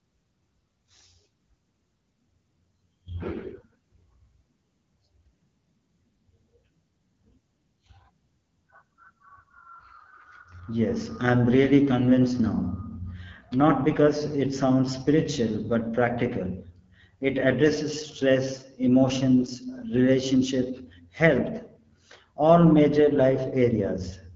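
From start to finish the speech sounds rough and raspy, with a buzzy, grainy edge. That points to the AMR wideband (HD Voice) codec at one of its lowest rates, around 8.85 kbit/s, too few bits for its pulse-driven model to rebuild speech cleanly.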